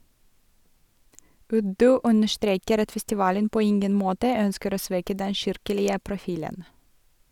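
Speech recording with no audible technical faults anywhere.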